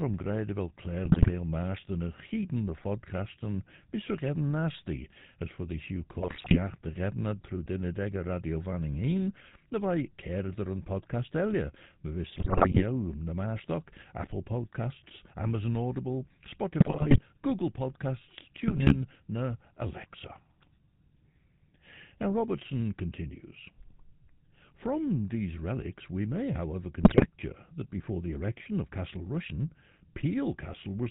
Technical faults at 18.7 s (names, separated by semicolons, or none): GSM full-rate codec; GSM bit errors